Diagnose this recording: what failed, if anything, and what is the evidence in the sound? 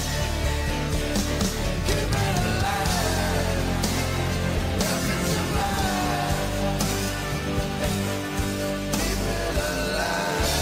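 A skip ahead at the network or jitter-buffer stage: about a second of audio was discarded while later packets were already queued, so playback jumps forward at 4.78 to 4.80 s. The two sides are spliced directly with no silence, and that stretch of sound is simply missing.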